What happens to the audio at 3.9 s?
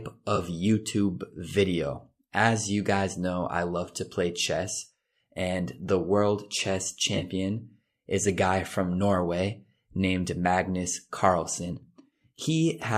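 Between "you guys know I" and "to play chess and", from 3.86 to 3.89 s, an AAC frame loss with concealment briefly smears the audio into a noisy, phasey patch. The decoder rebuilds the missing span from the last good spectrum. The gap fits two lost frames of a likely low-delay AAC stream.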